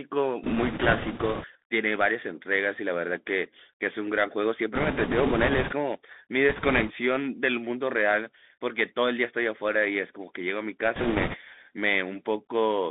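Bluetooth CVSD headset codec, throughout the speech: a one-bit delta coder with an adaptive step, consistent with a 64 kbit/s headset link, confines the speech to roughly 250 Hz to 3.6 kHz. Loud high-frequency sounds outrun the step size and distort, s sounds turn scratchy, and granular hiss sits underneath.

Bit errors on a Bluetooth voice link occur at 0.44–1.46 s, 4.75–5.73 s, 6.49–6.92 s and 10.95–11.37 s, at a few percent of bits. Because each flipped bit nudges the signal only slightly and the error decays, they produce a rushing crackle rather than clicks, heaviest in the second and fourth bursts.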